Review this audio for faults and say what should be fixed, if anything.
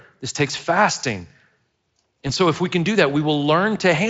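At 2.27 to 2.32 s the speech shows VoIP packet loss concealment. About 20 ms of audio went missing, which points to a single lost frame. The Speex decoder filled the gap by repeating its last pitch and filter with falling gain, and recovery took a few frames because each frame builds on the one before. On a spectrogram the harmonics smear flat and dim briefly, and the waveform shows a short, repetitive, fading stretch. Adding a jitter buffer or forward error correction on the network path would prevent it.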